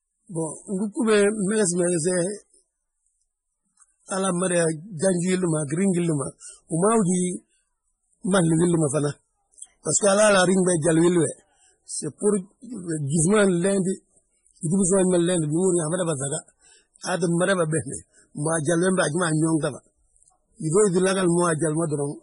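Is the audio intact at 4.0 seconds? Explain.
No. At 4.0 seconds the speech carries MP3 compression damage, as it does across the whole clip. Nothing sounds above 10.5 kHz, where the treble is cut off sharply. The damage is heavy, which points to a low bitrate of around 24 kbps. The likely cause is an encoder short of bits. It drops the top band and zeroes weak frequency lines, which flicker on and off between frames. This gives a watery, swirly quality, with chirpy s sounds and smeared attacks.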